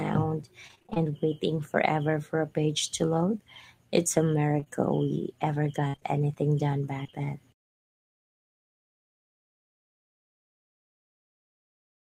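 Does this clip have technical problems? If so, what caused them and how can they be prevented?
Yes. Repeated packet loss (robotic sound) runs from 0.67 to 1.12 s. Holes of up to 23 ms each are patched from the preceding sound, leaving nearly half that stretch synthetic and giving a choppy texture. Unlike a single dropout, the holes come in quick succession. It returns more sparsely from 5.88 to 7.27 s, with one hole reaching 57 ms. A larger jitter buffer and network redundancy (FEC) prevent it.

Short concealed packet loss occurs at 4.60 to 4.64 s and again at 4.64 to 4.68 s. Two back-to-back 20 ms holes are filled by extending the last sound and then blended back, which produces one brief smear rather than a sustained robotic stretch. Forward error correction or retransmission prevents this.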